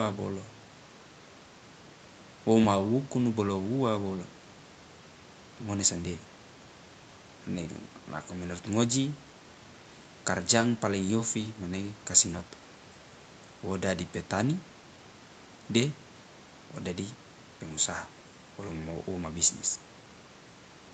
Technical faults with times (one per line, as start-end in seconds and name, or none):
none